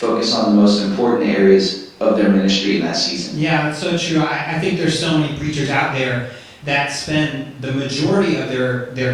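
No technical faults are audible.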